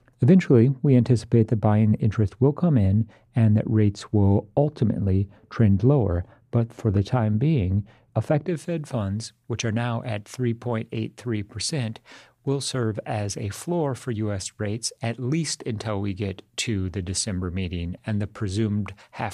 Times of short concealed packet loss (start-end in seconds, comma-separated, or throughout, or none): none